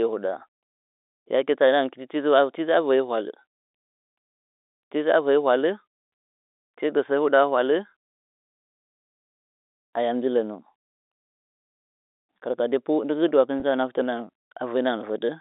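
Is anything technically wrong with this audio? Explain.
Yes. At 13.60 to 13.62 s the speech briefly turns slightly held and buzzy, as if one pitch cycle were stuck for an instant, then carries on. This is packet loss with pitch repetition. About 20 ms of audio went missing, which fits a single lost packet. The receiver filled the hole by repeating the last pitch period it had. The gap was too short to fade into silence, so the repetition comes through as a brief buzz over the narrowband telephone sound.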